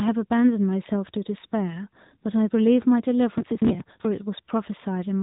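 Throughout, the speech carries AMR narrowband mobile codec damage: nothing passes above about 3.8 kHz, and the vocal-tract model driven by sparse pulses leaves a plainly audible buzzy, synthetic edge, consistent with a mid-rate AMR-NB mode around 10 kbps.

From 3.38 to 4.05 s, processor overload crackle rides on the audio. Dozens of consecutive buffer deadlines are missed, each skipped outright, which fits buffers of roughly 10 ms. The resulting run of tiny hard-edged gaps is heard as gritty tearing that stops once the load clears.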